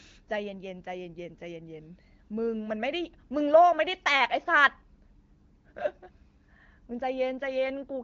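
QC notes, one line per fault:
The speech comes through an AMR wideband (HD Voice) codec path at a rate that sounds like one of the higher modes, around 16 kbit/s, with only light coding texture and nothing above about 7.5 kHz, as the wideband band limit would leave it.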